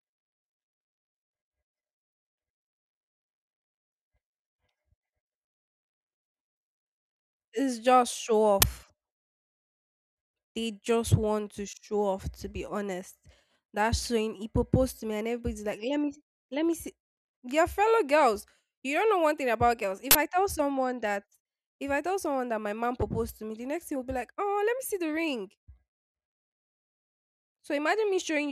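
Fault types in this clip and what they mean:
uninitialised buffer: leftover memory played as samples, giving loud digital noise bursts, 10 ms after "just show" and 40 ms at 20.11 s; waveform shows abrupt blocks, spectrogram broadband vertical bars.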